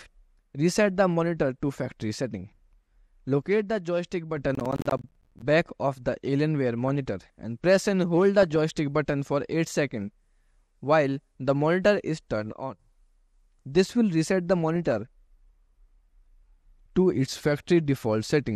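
Throughout the clip the top end sounds dull, with a gurgling, grainy texture, most likely from MP2 compression at a low rate that fits about 80 kbps. With too few bits, the upper sub-bands of the 32-band split are switched off and come back frame by frame, and the bands that remain are coarsely quantised. On a spectrogram the highs stop at a ragged ceiling, with blocky patches flickering above it.

From 3.45 to 4.37 s one channel probably drops out. In the mono sum, sound common to both sides falls by about 6 dB at once, and anything that was only in the missing side disappears. The waveform envelope steps down sharply at the start and back up at the end.

From 4.55 to 5.42 s comes processor overload crackle. Audio buffers of roughly 10 ms miss their deadlines again and again, about forty times, and each missed buffer is filled with silence. The result is a gritty tearing over the sound. 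The waveform shows a comb of short, hard-edged gaps, and the spectrogram shows thin broadband vertical lines at each edge.

DAB burbling appears at 6.88 to 6.91 s and 8.41 to 8.72 s. Bit errors of roughly a few tenths of a percent get past the error correction and corrupt sample values and scale factors. Short blips of noise appear in single sub-bands, and single sub-bands jump in level for up to a frame. On a spectrogram these show as isolated bright rectangles within one band.

The channel drops out again from 12.53 to 12.79 s, with the same 6 dB step down in the waveform envelope.

The burbling returns at 14.63 to 14.92 s and at 17.27 to 17.71 s. The last burst is the longest and covers the most frames.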